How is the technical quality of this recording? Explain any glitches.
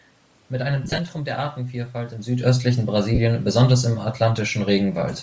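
The recording has two kinds of fault: a grainy codec texture throughout and two short dropouts where audio frames went missing.

Bluetooth LC3 compression colours the whole clip. The speech carries a breathy, grainy edge, likely from LC3 coding at a low rate, which fits about 32 kbps with 7.5 ms frames. At that rate the encoder discards much of the upper spectrum and fills it back in with noise. On a spectrogram, the region up to the 8 kHz ceiling looks mottled and noise-like rather than finely detailed.

Lost LE Audio frames cause the two glitches. The first runs from 0.84 to 0.99 s: about 83 ms of audio is missing, spread over roughly 135 ms in short gaps, the longest about 20 ms. The pattern fits around eleven 7.5 ms frames. The second comes between "im südöstlichen" and "besonders im", from 3.15 to 3.19 s, about 38 ms, which fits five frames. In each gap the decoder repeats the last spectrum with randomised phase, so the sound smears into a brief noisy blur. 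On a spectrogram, harmonics give way to flat, smeared patches. On the waveform, the envelope dips and roughens. The talker's level shift near 2 s is natural and not part of either glitch.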